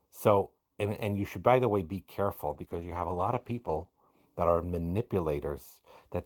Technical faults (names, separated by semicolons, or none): call bitrate drop